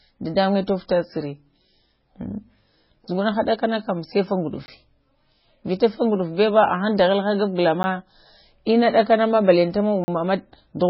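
The speech sounds watery and swirly throughout, with nothing above 5.5 kHz, likely from heavy MP3 compression at a very low bitrate, around 16 kbps. Blocks of digital silence cut in hard: at 4.66–4.68 s just after "sai fa", a tick at 7.83 s, and a 40 ms hole at 10.04–10.08 s.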